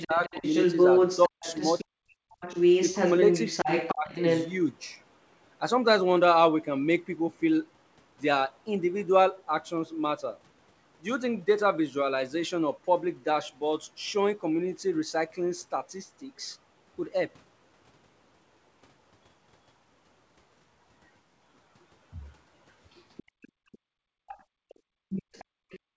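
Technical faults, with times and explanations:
0.0 to 4.5 s and 22.9 to 25.8 s, other side's voice leaking through: a second talker sits under the main speech. In the opening stretch it is roughly as loud as the talker. Near the end it is much fainter, about 15 dB down. This is likely loudspeaker sound reaching the microphone that the echo canceller failed to remove. It is a distinct second voice, which sets it apart from room noise or reverberation of the talker's own speech.
0.05 to 0.44 s, 1.29 to 2.28 s and 3.92 to 4.08 s, speech suppressed in double talk: the talker's voice dips in pieces while the leaked voice is also present. The first dip is shallow, around 15 dB. The dip from 1.29 s cuts away about half a second of sound by some 40 dB, and the one near 4 s drops by about 35 dB. Both sides are talking at once, so the canceller likely pulled everything down together. Because the talker's own speech is being chopped, this differs from the leak, which adds sound rather than removing it.
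23.31 s to the end, background gated by the echo canceller: the room sound behind the talker sinks by about 35 dB while the loudspeaker signal plays. The canceller is clamping the microphone hard whenever far-end sound arrives, so the ambience vanishes instead of fading naturally. Unlike double-talk suppression, the effect falls on the background rather than on chopped syllables. The result is an unnaturally dead stretch of room sound, within a band that stops at 8 kHz.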